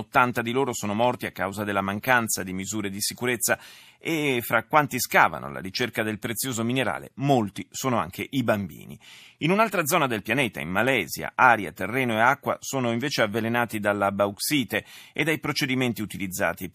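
No technical faults can be heard anywhere in the speech; the signal holds steady throughout, with nothing breaking into it.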